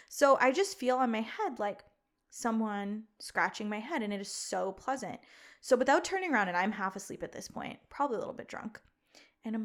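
A recording of speech with no technical faults to report. Nothing in it calls for a time, a cause or a repair.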